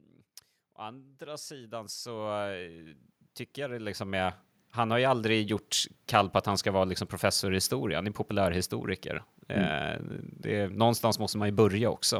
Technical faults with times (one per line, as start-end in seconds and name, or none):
0.76-2.93 automatic gain rising
3.54-5.62 automatic gain rising